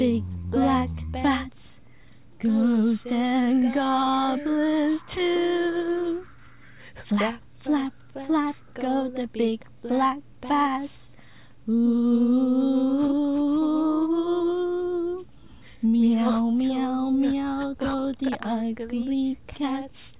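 No technical faults can be heard anywhere in the clip. Nothing in the audio calls for a timestamp or a repair.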